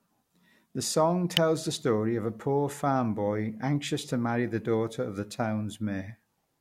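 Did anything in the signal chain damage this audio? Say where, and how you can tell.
Yes. At 1.37 s a single sharp snap sits on top of the speech, peaking around -5 dBFS. This is an electrical switching spike, entering at the analogue wiring. A nearby switch, motor or static discharge likely arced, and the line picked up the burst.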